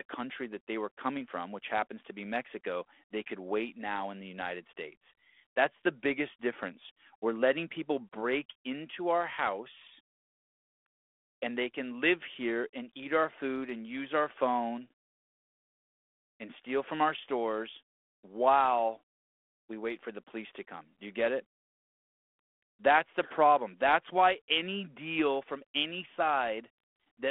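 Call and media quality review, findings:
No faults found.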